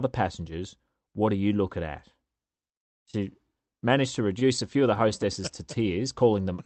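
Between 4.39 and 5.12 s, the speech is broken by scattered short gaps, around five brief ticks and smears, none longer than roughly 15 ms. Lost or late packets left small holes, each patched by extending the preceding sound, together about 50 ms of the span. The audio also passed through a call codec whose top end stops near 8 kHz, which fits Opus at a modest bitrate.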